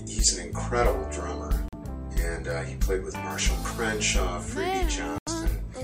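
The audio cuts to silence twice, from 1.68 to 1.74 s and from 5.18 to 5.28 s, with playback resuming further along. The likely cause is a Bluetooth dropout, where late packets were discarded; the gaps fit roughly two and four lost frames.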